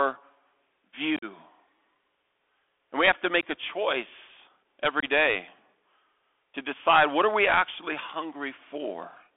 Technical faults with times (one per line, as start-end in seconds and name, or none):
0.00-9.37 Bluetooth CVSD headset codec
1.16-1.25 unconcealed Bluetooth headset packet loss
5.00-5.04 unconcealed Bluetooth headset packet loss